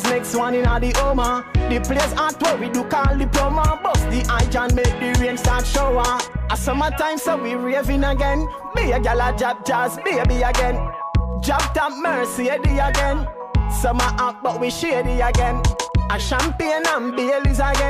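No technical faults can be heard anywhere here.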